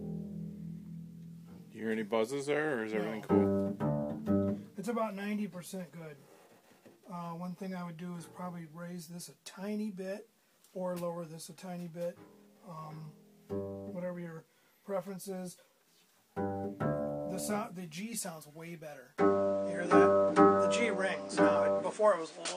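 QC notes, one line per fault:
19.18–22.57 s, input switched to a poorer device: at 19.18 s the sound abruptly loses its top end, with nothing above 9.4 kHz, and stays narrower to the end of the clip. There is no gap at the changeover. The level shifts by roughly 5 dB, and a new background noise floor sits around 30 dB under the signal. The likely cause is the recording input moving mid-take to a different, lower-grade microphone or headset path with its own bandwidth, gain and self-noise.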